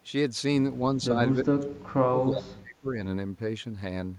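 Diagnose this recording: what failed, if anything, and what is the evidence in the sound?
Speech suppressed in double talk, at 1.44 to 1.69 s and again at 1.86 to 2.95 s, in the call-processing stage. The speech drops sharply in level, about 20 dB in the first stretch and roughly 30 dB at its deepest in the second, with the second lasting far longer and breaking the sound up in pieces. The likely cause is an echo canceller that, with both ends talking, could not tell near-end speech from loudspeaker echo and attenuated everything together.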